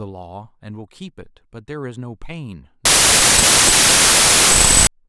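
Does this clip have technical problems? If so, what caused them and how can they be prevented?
Yes. From 2.85 to 4.87 s, packed 24-bit samples read as 32-bit integers cause a wrong sample width: loud noise buries the speech, which plays 1.33 times fast. Passing the sample format explicitly from writer to reader prevents it.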